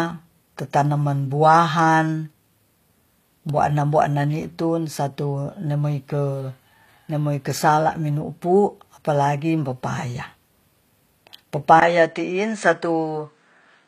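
Throughout, the speech carries plainly audible damage from what is likely HE-AAC compression at a low bitrate, around 24 kbps: only the lower spectrum is coded, and the treble is rebuilt from copied lower bands, so harmonics misalign and s sounds turn gritty, metallic or lispy.

At 11.80 s the input likely switched to a poorer device, with a 20 ms silence at the change. From there to the end, nothing reaches above 9 kHz, so the sound turns duller, and a new background noise sits well below the speech while the level stays roughly the same.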